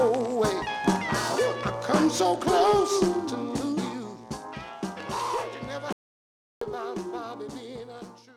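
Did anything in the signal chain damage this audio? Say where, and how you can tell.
Yes. At the codec or storage stage, compressed frames were skipped at 0.61 s and 3.76 s. The sound jumps ahead each time, by about 100 ms and then about 300 ms, which fits roughly five and fifteen frames of about 23 ms.

There's an audio dropout to silence from 5.93 s to 6.61 s, about 690 ms of silence with no room tone underneath. The sound just stops mid-flow and picks up again. That most likely means the input was lost upstream while the recorder kept writing silence.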